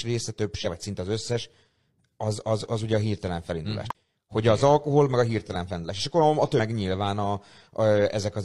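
Brief glitches break in at 0.61–0.66 s, just before "vagy szinte az összes", then at 3.90–3.95 s and 6.55–6.60 s: damaged data in a compressed stream throws the decoder out of sync until it finds the next frame.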